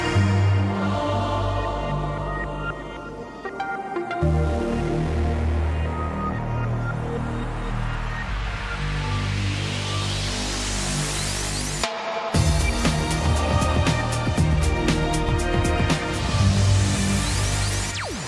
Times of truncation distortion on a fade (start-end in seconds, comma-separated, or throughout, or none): none